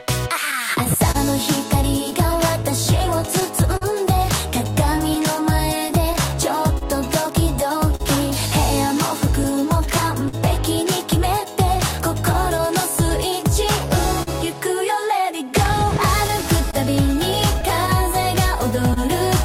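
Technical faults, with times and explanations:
Throughout: clock drift between sender and receiver. The sender's clock runs roughly 3% slower than the receiver's, so the jitter buffer keeps draining. The receiver has to stretch material to cover the shortfall and now and then runs briefly short of audio. This shows up as small timing hiccups recurring across the whole clip at uneven intervals.
0.51–3.83 s, 4.98–8.02 s, 12.33–13.12 s and 15.37–18.98 s: scattered short gaps. Packets arrived too late or not at all, one at a time across each stretch. The receiver bridged each hole by extending the preceding sound, so nothing is actually lost. The first two stretches each hold about seven small patches, the longest around 40 ms. The third has about three very brief ones. The last has about ten, the longest around 30 ms. They come across as brief ticks, smears or momentary hiccups.
2.92–18.47 s: repeated timing corrections. 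To keep pace with the slow sender, the receiver repeatedly inserts small stretched pieces, always lengthening and never cutting. Playback runs at about 99% speed, adding roughly 150 ms over the span. Because the insertions are small and unevenly spaced, they are heard, if at all, as a slightly unsteady tempo or the occasional minor hitch.
10.28–10.35 s and 14.23–14.29 s: short stall from a late packet. In each case the jitter buffer ran empty when a packet failed to arrive on time. The receiver held the last sound for 45 ms until the data came in, then resumed from the same point. Nothing is missing, but the sound at each point is held too long, possibly with a slight buzz or dip. The playout delay is 45 ms longer after each stall.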